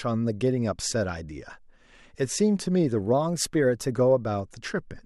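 From 3.13 s to 3.92 s the speech suddenly runs about 6% faster and sits roughly a semitone higher (102 cents), then snaps back to normal. This is likely a drift correction step, where clock-matching software briefly changed the playback rate to rebalance its buffer.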